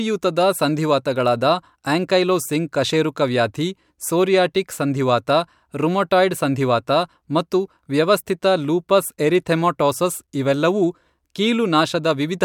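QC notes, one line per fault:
Nothing stood out on listening to this speech clip.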